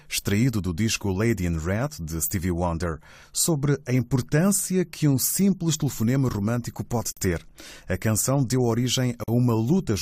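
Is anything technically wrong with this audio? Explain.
Yes, there are two gaps at joins of encoded pieces, at 7.12–7.17 s (about 51 ms) and 9.24–9.28 s (about 43 ms). The speech drops to abrupt, slightly smeared silence, then resumes exactly where it stopped. These untrimmed encoder delay and padding frames were left in when separately encoded sections were joined.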